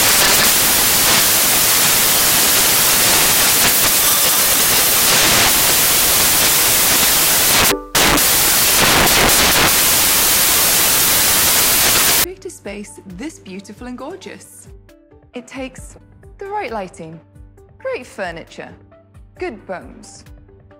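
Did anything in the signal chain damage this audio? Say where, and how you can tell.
Yes, at the sample-format conversion stage. From the start to about 12.24 s it's loud, harsh broadband noise. Those are samples built from the wrong bytes: a misaligned or byte-swapped read turns the jittery low bits into the big part of each value.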